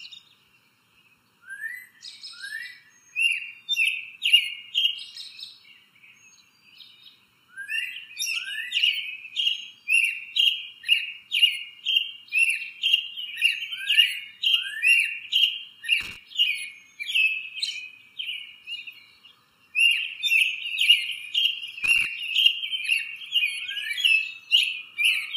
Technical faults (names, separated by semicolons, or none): channel delay (comb filtering); loose connector crackle